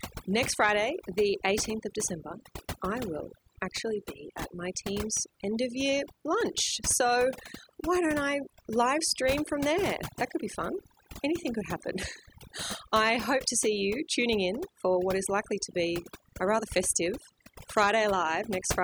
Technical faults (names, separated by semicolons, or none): overdone noise removal